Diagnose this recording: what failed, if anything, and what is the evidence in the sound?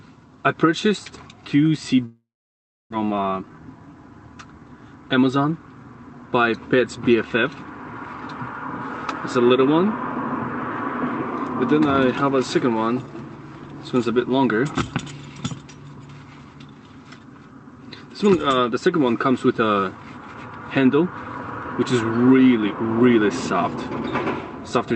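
Network stage: a long network dropout, likely from lost packets. From 2.05 to 2.94 s the last sound is stretched into a fading buzz. It then gives way to about 0.67 s of silence. The sound resumes with roughly 0.6 s missing, and the delay has jumped by about 0.3 s.

Buffer stage: a jitter buffer speed-up follows, heard through the 8 kHz band limit of the call codec. From 3.04 to 4.03 s the sound runs 114% fast at unchanged pitch, trimming about 0.15 s. From 4.89 to 5.66 s it runs 112% fast, trimming about 0.1 s. Short pitch-period slices are being cut out to drain the built-up delay.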